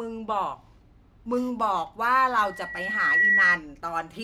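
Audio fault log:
2.38–3.60 s, loudspeaker feedback squeal: a pure 1.9 kHz tone swells over most of a second to about 10 dB above the speech, then stops. The microphone hears its own loudspeaker, and at that frequency the loop gain exceeds one, so the tone keeps feeding itself.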